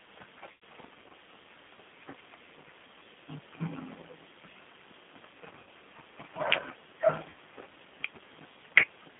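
Throughout, the speech has been passed through the G.729 codec at 8 kbit/s, which rebuilds each frame from a vocal tract filter, a pitch predictor and sparse pulses. The result is a narrow line band of roughly 150 Hz to 3.5 kHz and a plainly audible rough, synthetic texture.

VoIP packet loss concealed by the speech codec occurs three times: at 0.52 s with about 100 ms missing, from 5.59 to 5.66 s with about 80 ms missing, and from 7.30 to 7.34 s with about 40 ms missing. Each time, the decoder extrapolates from its last pitch and filter, stretching the sound into a fading buzzy tone or coloured noise.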